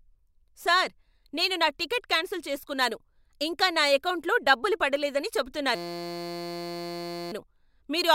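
After "నా ఎకౌంటులో డబ్బులు పడలేదని", a system hang loop runs from 5.75 to 7.32 s: a 5.8 ms buffer repeats, producing a steady 172 Hz buzz, consistent with a 256-sample buffer.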